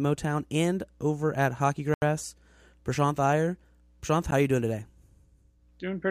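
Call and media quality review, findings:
Block of digital silence, two events: 80 ms hole at 1.94–2.02 s; roughly 12 ms tick at 4.31 s, just before "are you doing today". Probable cause: output buffer underrun zero-filling samples. Waveform flatlines to near silence with hard edges. Spectrogram shows a blank column.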